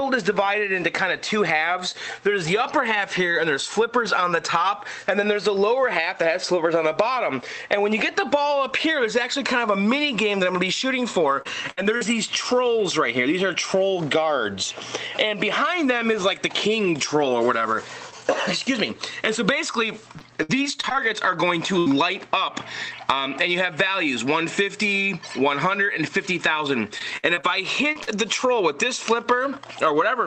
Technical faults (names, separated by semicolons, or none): repeated packet loss (robotic sound); burst of packet loss; short concealed packet loss